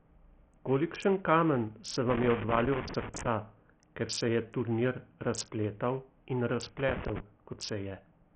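A speech recording with heavy codec damage throughout: nothing reaches above 8.9 kHz, the remaining treble flickers, and a gritty, aliased grain clings to the sound. This is likely Bluetooth SBC compression at a starved bit pool, near 48 kbps, where the top sub-bands lose their bits. Unlike a plain low-pass filter, the cut wavers and adds grit. Loose connector crackle occurs from 2.1 to 3.27 s and from 6.78 to 7.2 s as irregular scratchy bursts from a contact making and breaking. Its uneven, clustered timing sets it apart from steady vinyl-style clicks or regular dropout ticks.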